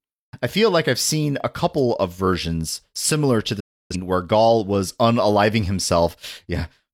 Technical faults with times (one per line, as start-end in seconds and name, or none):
3.60-3.96 digital broadcast dropout